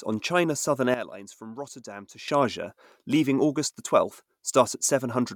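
At 0.94 s the speech and its background noise fall together by about 12 dB in a sudden gain jump, recovering just as abruptly at 2.28 s, likely from a gain setting applied without a ramp. The waveform shows a sharp step down and back; the spectrogram dims uniformly across all frequencies.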